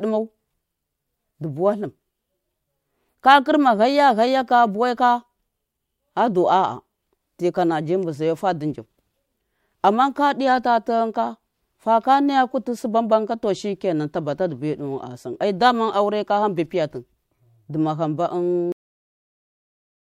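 At 18.72 s the speech stops mid-sound and drops straight to digital silence with no decay: a cut-off end, where the final buffers were never written or played.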